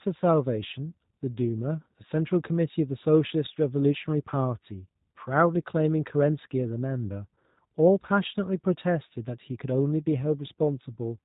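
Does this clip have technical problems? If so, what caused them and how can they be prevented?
Yes. Throughout the speech the sound is dull and boxed in, with nothing above about 3.8 kHz, and it has a rough, slightly synthetic grain that is plainly audible. This is G.729 codec damage, and the character fits an 8 kbit/s G.729A stream. The codec discards the waveform and rebuilds each 10 ms frame from a vocal tract filter, a pitch predictor and a few pulses, so fine detail turns buzzy. To prevent it, record or transmit with a wideband codec at a higher bitrate.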